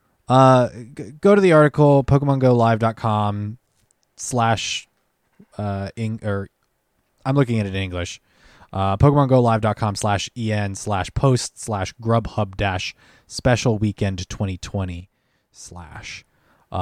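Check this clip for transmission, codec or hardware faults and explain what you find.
One fault is present, a sudden gain jump. From 15.00 to 15.91 s the speech and background noise drop together by about 7 dB, likely from a gain setting applied without a ramp.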